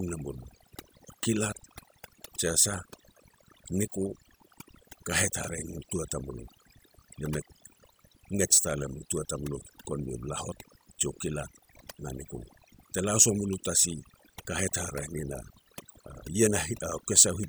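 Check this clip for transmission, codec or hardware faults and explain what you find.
One processing fault runs through the whole speech clip: overdone noise removal. A noise reducer set too aggressively cuts any frequency band resembling its noise estimate, taking quiet speech detail too, so pauses collapse into near silence with twinkling specks.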